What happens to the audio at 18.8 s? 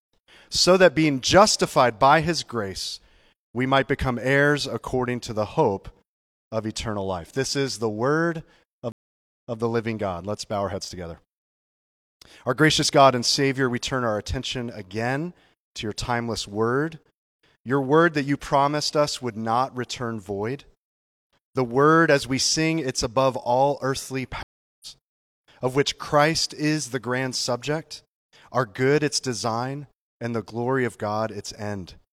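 Nothing goes wrong at 18.8 s; the speech continues intact through that moment.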